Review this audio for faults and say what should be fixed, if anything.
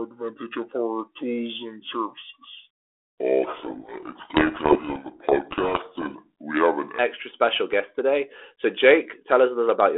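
From 0.00 to 6.99 s, a section at the wrong speed plays at 0.672 times normal, roughly seven semitones low, so speech is deep and dragging until just before "special guest today". This likely comes from a wrong clock or sample-rate setting. Confirm playback and editing rates match the recording rate.

From 3.44 to 6.23 s, a codec payload misread buries the speech in harsh distortion. The G.726 code words are being read with their bit order reversed, so each sample's difference value is wrong. The 32 kbit/s path itself sounds normal elsewhere. Agree the G.726 bit-packing order at both ends of the link.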